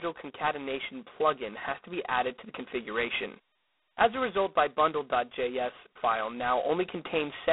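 Speech, heard throughout through G.726 ADPCM at heavy damage. A harsh, rasping hiss rides on the speech and swells and shrinks with its level, which fits the coarse 16 kbit/s mode, where only two bits per sample code the difference from the predicted value. The sound sits in a narrow line band of 250 Hz to 3.5 kHz. On a spectrogram, energy stops flat near 3.9 kHz, with grainy noise filling the band under each syllable.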